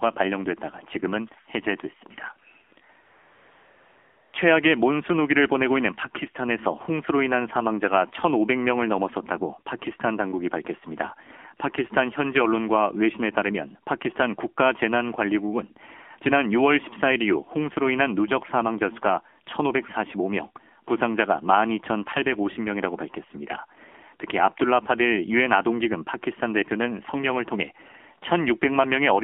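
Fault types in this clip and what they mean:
AMR narrowband mobile codec: The whole clip has been carried by the mobile speech codec used on 2G and 3G networks. It rebuilds speech from a vocal tract model excited by a few pulses, rather than sending the waveform itself. The damage is plainly audible. The voice sounds buzzy and synthetic, which fits a low rate of around 7.4 kbps. The band is squeezed to roughly 250 Hz to 3.4 kHz. There is no low bass and no air at the top.
AMR comfort noise: From 3.05 to 4.34 s, about 1.28 s, the phone stopped sending speech frames because it treated the talker as silent. The receiving end filled that gap with invented noise, built from a rough outline of the background's level and spectral shape. The real background disappears there. A smooth, even hiss takes its place, switching on at the start of the gap and off at the end.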